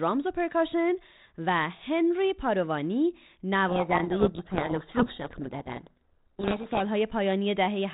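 From 3.68 s to 6.83 s the speech is buried in harsh, rasping distortion, a codec payload misread: G.726 code words arrive in the wrong bit order, so every prediction step decodes wrongly. The spectrogram fills with broadband smear below the 32 kbit/s link's 4 kHz ceiling, and the waveform turns dense and jagged.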